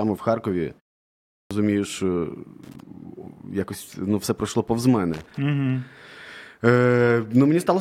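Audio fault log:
1.23–1.51 s, clipped start after a pause: after a 0.51 s silence, the output device wakes late, swallowing about 280 ms so speech begins abruptly without its onset.
2.64–2.80 s and 5.13–5.37 s, loose connector crackle: irregular scratching bursts, the second just after "ну все пройшло повз", as a faulty contact rapidly breaks and remakes the signal path.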